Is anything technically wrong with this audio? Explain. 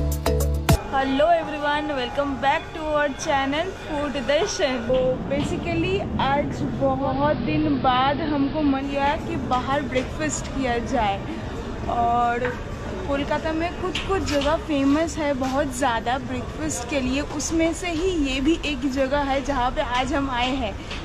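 Yes. From 6.95 to 8.92 s, digital radio blending to analogue occurs: the receiver crossfades over about 213 ms to the AM broadcast, cutting the treble and adding hiss about 25 dB down. On a spectrogram, the upper band vanishes and the noise floor rises; the waveform level shifts about 1 dB.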